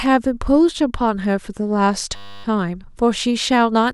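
From 2.16 to 2.44 s there's a system hang loop: playback froze and a 10 ms slice repeats, giving a steady 100 Hz buzz in the speech.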